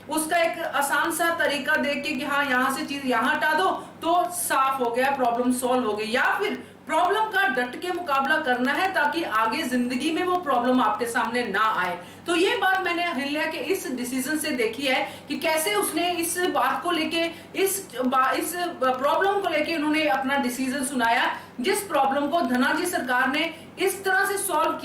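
From 0.15 s to 24.74 s, periodic USB or driver dropouts interrupt the audio path every 0.1 s, each blanking a sliver of around a tenth of a millisecond with silence. The result is a steady ticking, ten per second, audible wherever sound is present.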